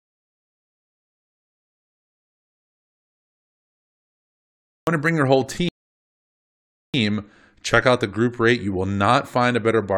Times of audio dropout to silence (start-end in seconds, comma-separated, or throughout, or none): 0.00-4.87